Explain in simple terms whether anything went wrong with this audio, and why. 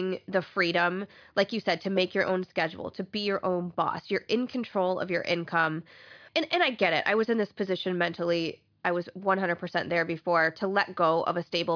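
Listening closely to the speech, nothing stood out as having gone wrong with the audio at any point.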